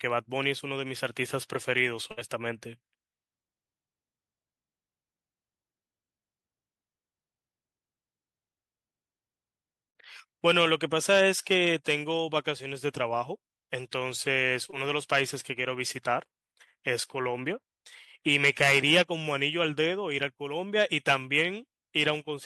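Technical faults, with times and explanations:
2.11 to 2.19 s, burst of packet loss: a run of consecutive packets in this speech failed to arrive in time, and the receiver covered the hole by extending the last sound it had and letting it sink in level, so about 56 ms of a fading, held continuation is heard in place of real audio. When the stream picks up again, roughly 60 ms of the original speech has been skipped, giving a small jump forward.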